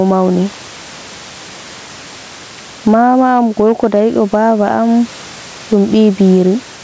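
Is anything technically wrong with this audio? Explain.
Yes, there are two faults. Gain pumping runs throughout: the gain is likely set far too high, so a fast limiter drags it down around 10 dB on each loud syllable. Hard clipping occurs from 3.04 to 4.77 s: the signal overdrives a stage by about 2 dB, its peaks are sliced flat, and they crackle.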